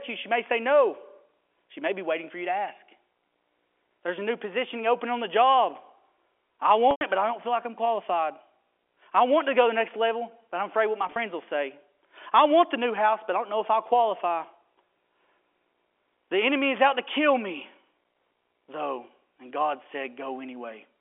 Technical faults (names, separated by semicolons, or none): packet loss with pitch repetition